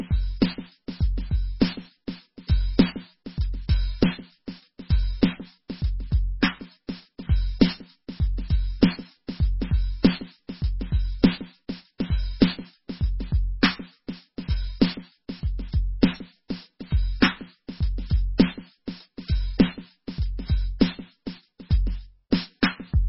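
Across the whole music clip the treble stops dead at 5.6 kHz, and what remains sounds watery and swirly, with metallic chirping on bright, noisy parts and smeared attacks. This is heavy MP3 compression, likely at a very low bitrate around 16 kbps, where the encoder drops everything above a fixed cut-off and switches weak frequency lines on and off from frame to frame. A spectrogram shows a flat ceiling at 5.6 kHz and a blotchy, flickering pattern of holes below it.

Pre-echo appears three times: from 6.40 to 6.42 s (spreading 21 ms ahead of the attack), at 11.98 s (18 ms), and at 22.31 s (16 ms). Each time a sharp attack lands late in a coding block, and the quantisation noise sized for that loud moment spreads back into the quiet just before it. You hear a brief hiss leading into a softened hit. On a waveform, a fuzzy ramp precedes each transient. On a spectrogram, a pale broadband smear sits just left of the attack.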